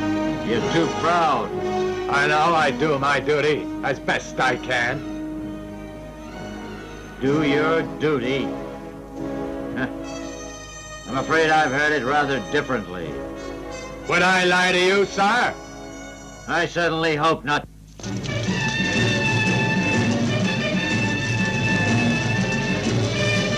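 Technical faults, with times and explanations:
No technical faults heard.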